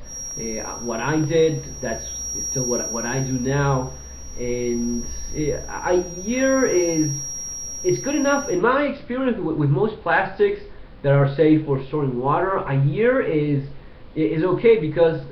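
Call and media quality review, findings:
Loudspeaker-to-mic loop likely held at the edge of feedback; feedback whistle 0.00–8.65 s, thin 5.7 kHz tone about 10 dB under signal.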